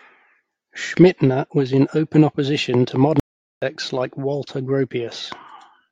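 At 3.20 s the speech cuts out abruptly for about 0.42 s, resuming at 3.62 s: a playback stall, likely from the player running short of data. The waveform drops to a flat line, and the spectrogram shows a clean, empty vertical gap.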